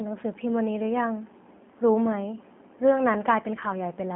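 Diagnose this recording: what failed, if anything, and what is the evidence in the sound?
Codec stage: G.729 coding runs throughout, with nothing above 3.5 kHz and a rough, synthetic, pulse-built texture that a plain band-limited line wouldn't add, consistent with 8 kbit/s coding.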